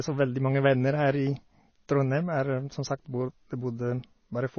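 Throughout, the speech is dull above 6.6 kHz and watery, with swirling, chirpy sibilants, unlike a plain low-pass, which points to likely MP3 compression at roughly 24 kbps.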